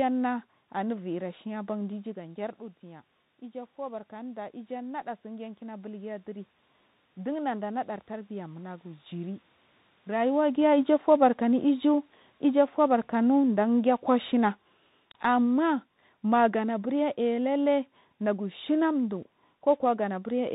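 The whole clip runs through a Bluetooth CVSD headset codec. The speech is narrowband, with nothing above 4 kHz. A granular hiss sits under the voice. S sounds turn scratchy, and loud high sounds distort where the one-bit steps cannot keep up.

From 1.17 to 6.55 s comes an automatic gain rise. The talker moves away around 2 s, and the input drops by about 12 dB. The gain control answers slowly, adding about 8 dB. Voice and room noise swell back together over several seconds.

From 10.14 to 14.66 s an automatic gain fall follows. The talker moves around 10 s. The control pulls its gain down by about 5 dB over roughly four and a half seconds. The speech and the background sink together.

At 14.31 s a Bluetooth headset packet repeat occurs. About 7.5 ms of audio was lost, which fits two dropped 3.75 ms packets. The chip replayed the previous packet's bits in their place. The result is a brief buzz near 267 Hz.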